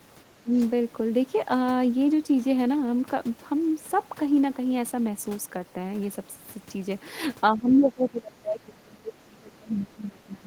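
Speech clip with speech suppressed in double talk: the level dips by around 15 dB from 0.43 to 0.52 s, then by around 25 dB from 7.56 s to the end. This is likely an echo canceller attenuating the talker while the far side speaks.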